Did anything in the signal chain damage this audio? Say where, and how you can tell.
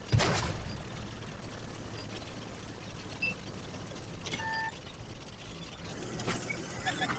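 Yes. A noise suppressor applied to music or sounds, in the call processing, acts throughout the clip. It mistakes held tones, ambience and tails for noise and turns them down by about 5 dB while attacks pass, so the sound pumps and thins. The top ends near 8 kHz, consistent with a wideband call codec.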